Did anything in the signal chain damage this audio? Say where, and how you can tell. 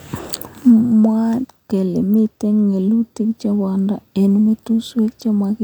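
Yes, at the codec stage, and throughout the speech. This is likely low-bitrate audio saved at a high bitrate: the content extends to about 20.1 kHz, as a roughly 310 kbit/s MP3 would, but traces of an earlier low-rate encode, probably near 48 kbit/s HE-AAC, remain and re-encoding cannot remove them.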